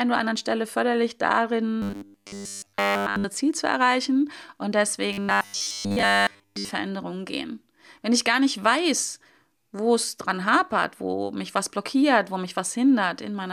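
From 1.82 to 3.24 s, and again from 5.13 to 6.71 s, the speech becomes a rigid metallic buzz fixed at 100 Hz. This is robotic sound from repeated short buffers, likely a 10 ms chunk looped while fresh audio is skipped. The first stretch is repeated throughout, and the second mostly. Unlike dropouts, it never falls silent, and the buzz still roughly tracks the speech.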